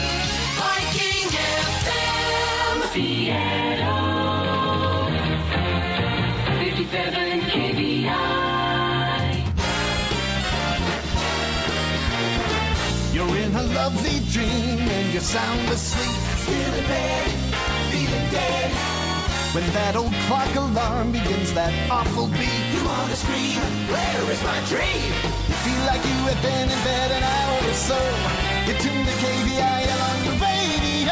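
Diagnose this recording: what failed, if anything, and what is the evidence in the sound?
Nothing in the audio points to a failure at any stage of the chain, so there's no diagnosis to make here.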